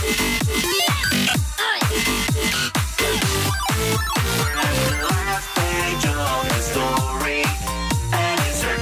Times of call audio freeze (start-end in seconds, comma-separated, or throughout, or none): none